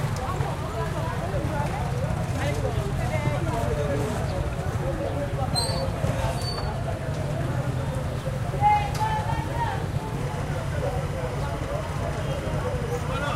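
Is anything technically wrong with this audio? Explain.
Yes, there's timecode bleed from 10.2 s to the end. Linear timecode at 25 frames per second leaks in, giving a chirpy warble around 1 and 2 kHz, roughly 20 dB under the sound.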